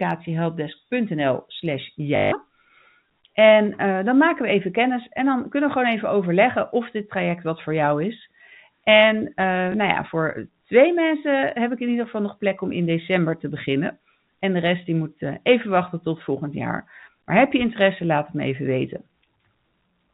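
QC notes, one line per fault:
2.16 to 2.32 s and 9.72 to 9.74 s, just before "ja voor twee": packet loss with last packet repeated. Lost audio was filled by replaying the previous chunk. The first gap gives a 160 ms robotic stutter buzzing near 50 Hz, which fits 20 ms packets. The second gap is one small blip.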